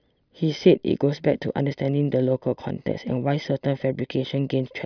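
No technical faults can be heard anywhere in this speech recording.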